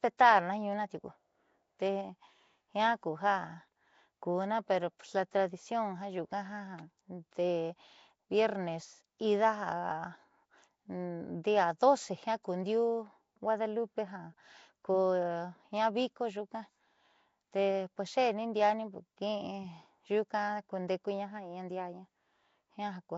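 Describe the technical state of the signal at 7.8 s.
At 7.8 s the speech has a rough, hissy halo and a smeared, underwater feel, with nothing above 7.7 kHz. It runs through the whole clip and is likely Nellymoser compression, around 32 kbps, starving weak bands of bits and filling them with noise.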